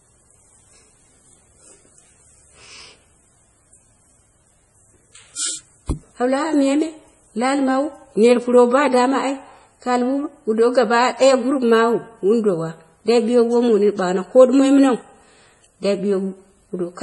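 Across the whole recording the speech carries heavy MP3 compression damage, with nothing above about 11.3 kHz. That ceiling, along with how badly the band is degraded, fits a bitrate around 32 kbps. At that rate the encoder is short of bits, so it drops the treble and zeroes weaker frequency lines from one frame to the next. The result sounds watery and swirly, s sounds turn into metallic chirps, and consonant onsets smear. Low-bitrate MP3 encoding is the likely cause.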